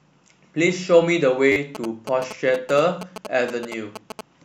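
Around 1.52 to 1.56 s there's a repeated buffer: the next chunk of audio didn't show up in time, so the playback device just looped the last one. Each repeat is tiny, which fits a 10 ms buffer, and it cycles several times with a hard edge at every join. That turns the speech into a quick buzzy stutter rather than a clear echo, and something like 40 ms of real audio gets skipped.

Then from about 1.75 s to 4.21 s you get GSM signalling bursts. A 2G phone close by is sending its short clusters of radio bursts while signalling the network, and the audio circuitry rectifies them into sound. That gives the classic galloping dit-dit-dit of short buzzes at roughly 217 Hz, sitting about 10 dB below the speech and running right through to near the end of the clip.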